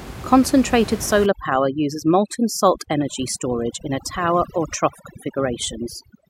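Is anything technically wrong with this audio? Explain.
Yes. From 1.26 s to the end, overdone noise removal gates individual frequency bands near the noise floor, leaving twinkling specks and a spectrogram speckled with isolated dots.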